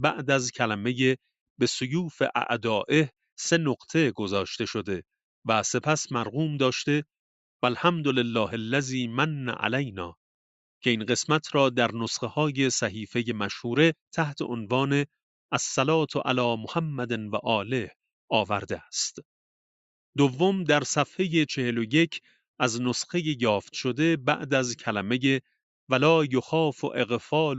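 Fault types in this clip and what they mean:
No faults found here.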